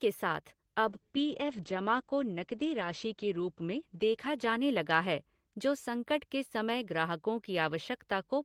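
From 0.91 to 5.37 s, a call bitrate drop cuts the speech's top end from 20 kHz to 8 kHz, consistent with roughly 32 falling to 10 kbps, sounding muffled and watery.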